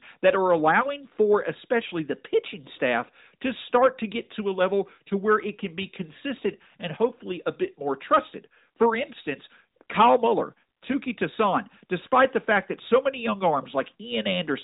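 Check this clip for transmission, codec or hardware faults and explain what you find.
No faults found in this speech recording.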